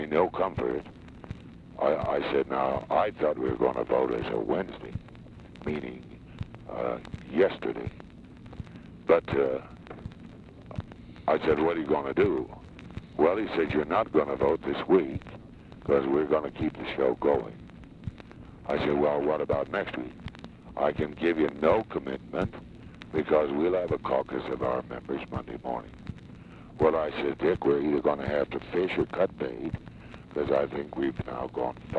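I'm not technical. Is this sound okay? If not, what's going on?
Yes, it's fine; there's nothing wrong to point out.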